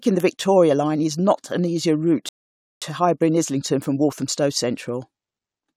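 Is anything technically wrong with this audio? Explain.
Yes, there's a rebuffering stall in this speech clip. At 2.29 s the audio drops to dead silence and doesn't come back until 2.82 s, so roughly half a second of gap gets inserted. What's happening is the player burned through everything it had downloaded and had to sit and wait for more data. When playback picks up again, it continues from exactly the point where it cut out. Nothing's missing, it's just delayed.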